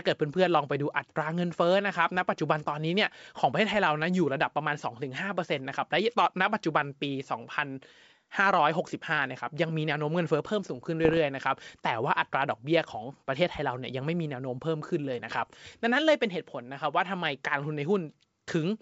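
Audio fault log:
11.04–11.18 s and 15.30–15.48 s, bit errors on an ADPCM link: pops and rough, level-jumping bursts lasting about 0.14 s and 0.18 s, at error rates of roughly a third and a half of a percent. Each flipped bit throws the decoder's step size and predictor off, so the damage rings on briefly rather than leaving silent gaps as packet loss would.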